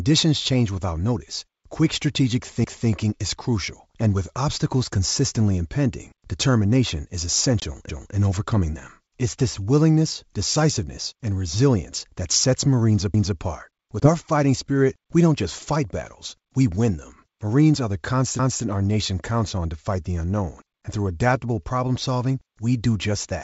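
Overlapping chunks at 2.64 s: the audio was handled in 5-second chunks, each starting 250 ms before the previous one ended, so that stretch plays twice and the join stutters. The same repeat recurs at 7.89 s, 13.14 s and 18.39 s.

Packet loss on an ADPCM call at 7.60 s: about one packet, 20 ms, dropped out and was replaced by silence, leaving a hard-edged gap. The decoder's predictor and step size then drifted from the sender's, so the speech returns distorted until it resynchronises by 7.66 s. The same happens at 14.00 s, with recovery lasting until 14.10 s.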